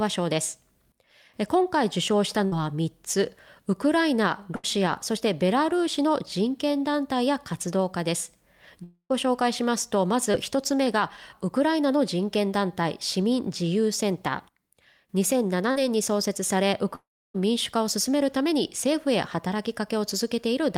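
At 2.45 to 2.54 s and 4.56 to 4.65 s, a burst of packet loss drops about 60 ms and then 80 ms. The last sound is continued and fades before the audio resumes further on. From 8.84 to 9.12 s, a long network dropout likely cuts about 260 ms. The concealment fades out, leaving about 70 ms of silence before the audio returns. At 10.32 to 10.35 s and 15.71 to 15.77 s, short concealed packet loss fills 20 ms and 40 ms. These are brief smears that blend back into the real audio. From 16.95 to 17.36 s, a second long network dropout likely loses about 400 ms. Here the fade ends in about 290 ms of silence, far longer than the bursts.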